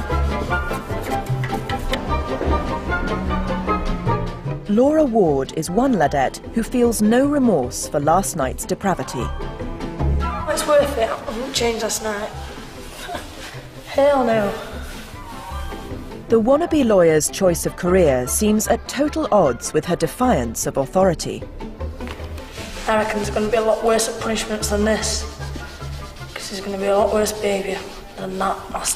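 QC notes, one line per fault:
No fault to note.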